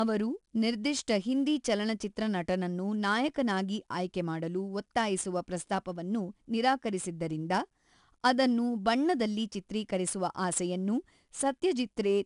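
Speech with 4-bit ADPCM compression throughout: gritty hiss tracks every loud syllable, attacks distort as the adaptive step lags, and nothing sounds above 10.6 kHz.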